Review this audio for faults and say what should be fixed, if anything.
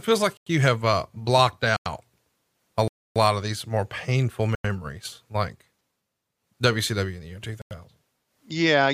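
Blocks of digital silence cut the speech at 0.37 s (after "feels like"), 1.77, 2.88, 4.55 and 7.62 s. Most last about 93 ms, which fits a missed 4096-sample buffer. The one at 2.88 s lasts 0.28 s. Abrupt cuts at both edges, with no fade, set these apart from concealed packet loss. Fix the audio thread so it always fills its output buffer on time.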